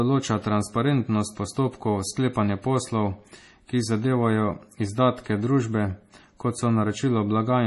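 A low-bitrate encode, likely MP3 compression at around 32 kbps judging by the damage, runs through the whole speech clip: nothing survives above 11.5 kHz, and weak frequency lines flicker frame to frame, leaving a watery, swirly texture, metallic chirps on s sounds and smeared attacks.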